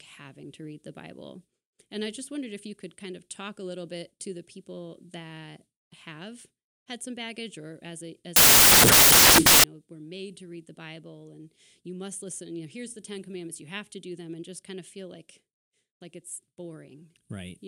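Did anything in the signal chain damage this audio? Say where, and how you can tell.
Yes. The sample-format conversion stage built samples from the wrong bytes between 8.36 and 9.64 s, after "or as a as" and before "know were made to". Misassembled bytes turn fast-changing low bits into loud, harsh broadband noise, shown as a full-band spectrogram smear and a dense, solid waveform block.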